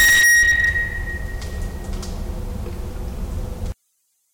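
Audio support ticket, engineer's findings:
Hard clipping, 0.0 to 0.78 s. Signal driven about 30 dB past the ceiling, so the peaks are cut flat. Flat tops generate dense high-frequency harmonics: a harsh fuzz on every loud sound rather than isolated crackle. Probable component: an input gain stage or converter overloaded at onset. The fault stops at 0.78 s.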